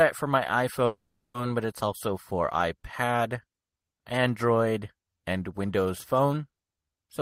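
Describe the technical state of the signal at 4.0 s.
At 4.0 s the speech signal is intact, with no audible technical fault at that moment.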